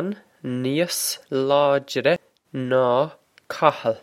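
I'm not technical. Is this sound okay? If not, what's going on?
No. At about 2.16 s you can hear a small tick and an instant of silence, and then the sound carries on from a slightly different spot, as if a tiny piece were skipped or replayed. This is a CD skip: a bump or a flaw on the disc knocked the player's laser onto another loop of the disc's track. The player went quiet for a split second and picked up again from that new position.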